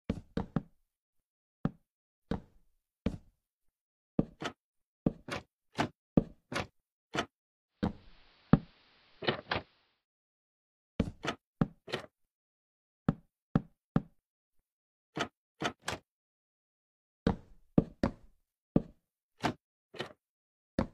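From 7.67 to 10.06 s, digital radio blending to analogue: a 490 ms cross-fade into the AM broadcast narrows the treble, adds hiss roughly 30 dB below the signal and shifts level by about 3 dB. Its smooth fades, rather than abrupt gaps, distinguish it from a dropout.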